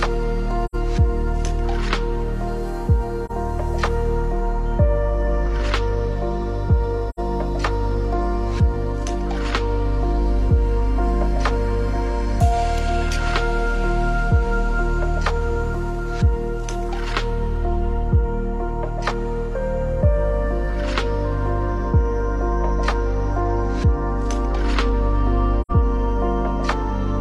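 AAC frame loss with muting occurs at 0.65–0.75 s, 3.25–3.31 s, 7.10–7.19 s and 25.61–25.71 s. Each gap is roughly 43 or 85 ms, fitting one or two zeroed frames, so the sound fades out and back in through the overlapping windows to leave a brief dip or a soft-edged hole.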